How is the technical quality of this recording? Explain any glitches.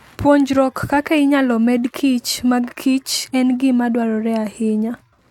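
No glitches or technical faults can be heard anywhere.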